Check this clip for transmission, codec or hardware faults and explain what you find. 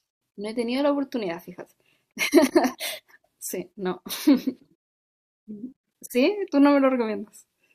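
No faults can be heard.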